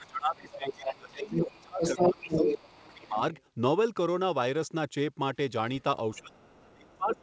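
From the start to 3.22 s the talker's speech sinks and breaks up, at its worst around 25 dB down, for roughly 3 s in total. This is speech suppressed in double talk: the echo canceller likely heard both sides at once, could not tell the talker from the loudspeaker echo, and pulled the whole signal down. From 6.13 s to the end the same dipping returns, now as deep as about 30 dB.

Over that first stretch, from 0.5 s to 3.09 s, a second voice runs under the talker at roughly the same loudness. This is the other side's voice leaking through. The far end was likely playing on the talker's loudspeaker and was picked up again by the microphone, with the echo canceller failing to remove it. It comes back only faintly later on, as a short scrap from 6.15 to 6.19 s and a trace from 6.5 to 7.2 s, both far below the talker. Throughout, the sound stops at 8 kHz, as expected from the G.722 call path.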